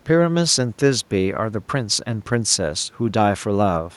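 Nothing technically wrong turns up in this short bit of speech, just a little room noise sitting about 37 dB below the voice, which is part of the recording itself.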